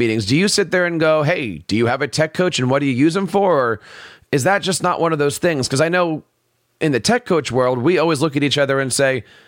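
Listening to the speech, nothing stood out as a technical fault at any point.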